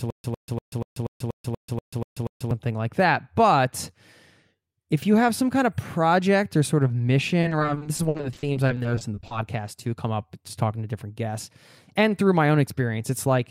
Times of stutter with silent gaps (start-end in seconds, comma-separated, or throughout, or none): 0.00-2.51